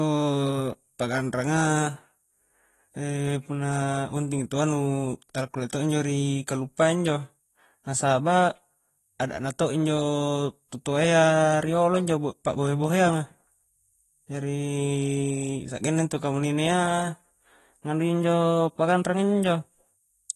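From start to finish the speech carries plainly audible damage from AAC compression, likely AAC-LC at a low rate, consistent with roughly 32 kbps. The encoder discards everything above 12 kHz and starves the remaining bands, so consonants sound dull and smeared, with a watery, fizzy warble on sibilants. A spectrogram shows a hard ceiling at 12 kHz and patchy, flickering holes in the upper bands, changing frame to frame.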